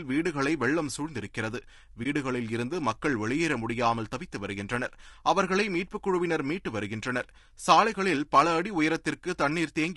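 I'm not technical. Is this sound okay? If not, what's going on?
No. Throughout, the speech sounds rough and grainy, likely from low-delay AAC compression, the kind used in video calls; the graininess clings to the voice rather than sitting underneath like background hiss. At 2.03 to 2.06 s there is AAC frame loss with muting: a tiny piece of sound vanishes and fades smoothly out and back in.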